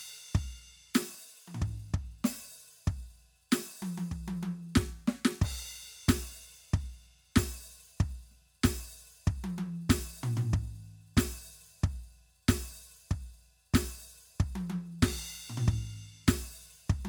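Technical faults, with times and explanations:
No technical faults detected anywhere in the music.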